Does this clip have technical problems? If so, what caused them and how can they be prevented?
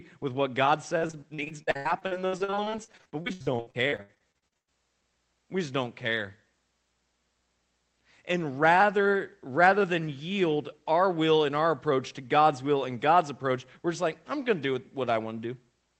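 Yes. Between 0.97 and 4.71 s the call connection suffered repeated packet loss, producing a robotic sound. Again and again, dozens of packets were dropped or arrived too late, and each hole was papered over by stretching the preceding sound. The gaps run up to 101 ms and cover roughly a third of that stretch, so the speech turns choppy, with pieces missing. The sound is band-limited to about 8 kHz, which fits a low-bitrate call codec. Prevention: use a more stable network path, with forward error correction or a deeper jitter buffer.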